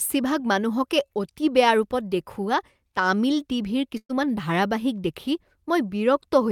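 A burst of packet loss at 3.97 to 4.11 s drops about 120 ms; concealment stretches and fades the last sound, then speech jumps ahead.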